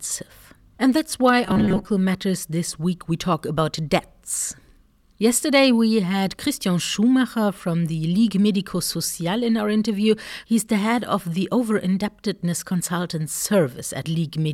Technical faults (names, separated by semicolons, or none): robotic sound from repeated short buffers